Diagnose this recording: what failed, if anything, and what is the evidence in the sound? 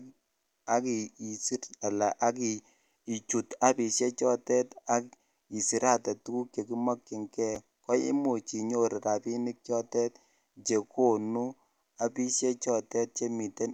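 The driver or buffer stage failed: at 7.55 s the speech garbles for an instant, the chunks out of order signature. A 5.33 ms chunk plays one chunk late, creating three hard joins. Unlike a dropout, no audio is missing.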